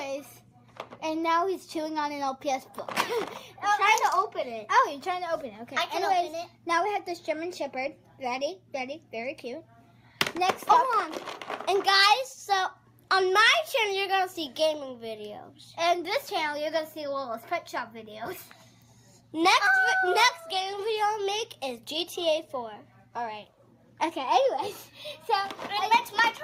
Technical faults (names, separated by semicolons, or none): none